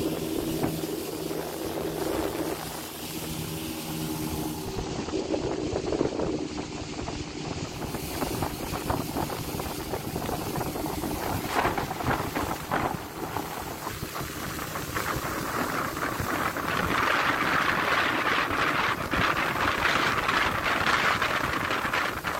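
From 4.41 to 8.08 s the hybrid receiver drops its digital stream and cross-fades, over about 0.45 s, into the FM broadcast: digital radio blending to analogue. Hiss rises and level dips about 1 dB, a joint shift that sets it apart from plain filtering.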